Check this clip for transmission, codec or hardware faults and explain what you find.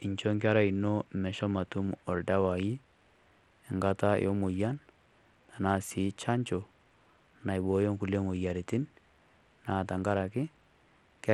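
One codec fault runs through the whole clip: plainly audible damage of the kind typical of Bluetooth SBC compression, which is the likely cause. Throughout the speech the treble thins and flickers, with a gritty, grainy edge. A starved bit pool, consistent with roughly 96 kbps, leaves the upper sub-bands with few or no bits and coarsely quantises the rest. A spectrogram would show the top bands blinking on and off in blocky patches, with noise and aliasing smeared across them.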